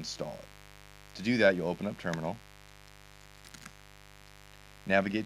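From start to finish the audio carries a mains buzz locked to a 50 Hz supply, sitting about 25 dB below the signal. It comes from sharp switching spikes, most likely from a dimmer, a rectifier or a poorly shielded cable, entering the chain twice per mains cycle. Those spikes spread energy across a dense series of 50 Hz harmonics reaching well into the kilohertz range, so the interference is heard as a steady, raspy buzz beneath everything.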